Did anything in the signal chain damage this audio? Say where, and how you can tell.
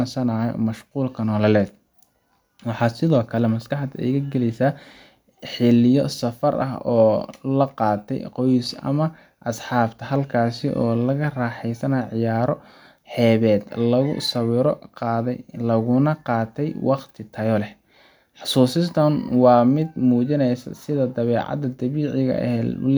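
No, nothing along the way seems to have hurt this speech recording; every stage of the chain appears to have passed it along intact.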